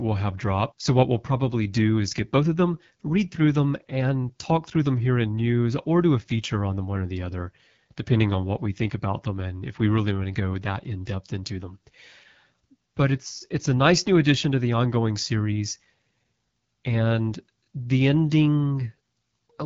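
From start to finish, the speech passes through the AMR wideband (HD Voice) codec, and the damage is plainly audible. The sound is rough and raspy, which fits the 8.85 kbit/s mode, one of its lowest rates. At that rate the codec models the vocal tract with too few pulses to rebuild the voice cleanly. Above 6.4 kHz it substitutes shaped noise for real detail. Nothing is heard above 7.5 kHz.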